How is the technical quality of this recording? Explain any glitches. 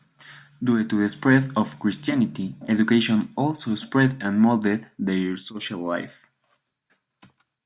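No technical glitches are audible.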